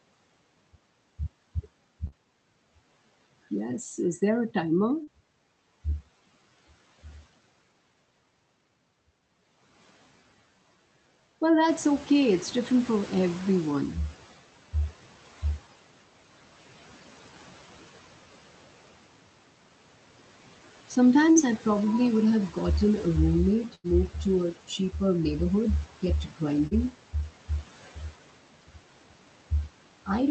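At 2.07–2.15 s and 5.04–5.10 s, just after "is there a", short concealed packet loss leaves a brief smear where about 40 ms of audio never arrived and was synthesised by extending the preceding sound. From 11.68 to 14.35 s the noise suppressor is catching up: the room noise jumps by about 13 dB near 11.5 s and passes through under-reduced before sinking by about 9 dB over roughly 2.7 s. Two further short concealed losses follow, at 21.31–21.38 s, right before "I probably would have", and at 26.67–26.74 s. Between them, at 23.75–23.89 s, a burst of packet loss drops about 80 ms just ahead of "to a cheaper neighborhood". The gap is bridged by 88 ms of fading, held concealment before the audio resumes with that stretch missing.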